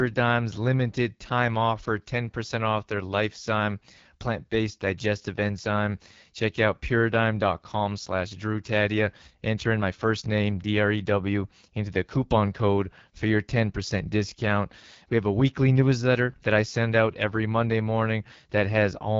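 Throughout the speech, AMR wideband (HD Voice) codec damage is plainly audible: consonants and vowels sound rough and raspy, with nothing above 7.5 kHz. The coarse pulse modelling points to one of AMR-WB's lowest modes, which fits 8.85 kbit/s.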